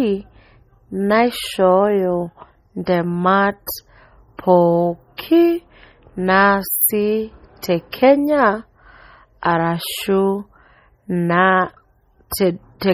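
Throughout the speech, heavy watery swirling is audible, with metallic chirps on s sounds, smeared consonant onsets and nothing above 20.4 kHz. The likely cause is MP3 compression near 32 kbps, with weak frequency lines switching on and off between frames.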